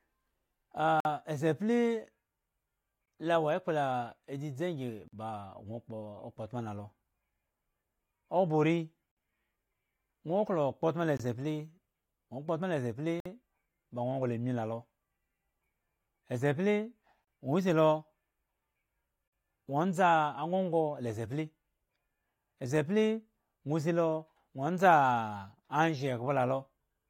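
Hard-edged silences of 20 to 55 ms break into the speech at 1.00, 3.06, 5.08, 9.12, 11.17, 13.20, 17.25 and 19.28 s. That's a gap between stream segments: the 2 s segments' time stamps don't quite meet, so the player pads each seam with silence.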